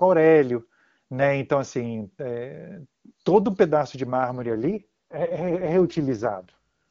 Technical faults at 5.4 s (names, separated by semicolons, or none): AMR rate drop